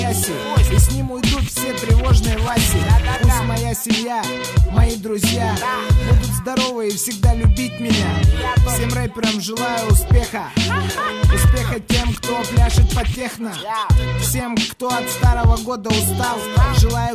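Nothing is technically wrong with this clip.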